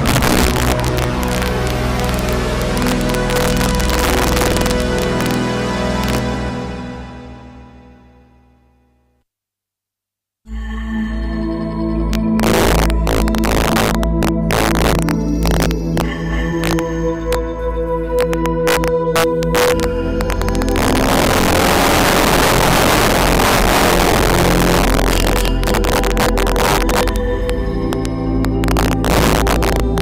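Integer overflow runs throughout: signal driven about 9 dB too hot wraps a few percent of peaks to the opposite sign, producing violent cracks sharper than clipping.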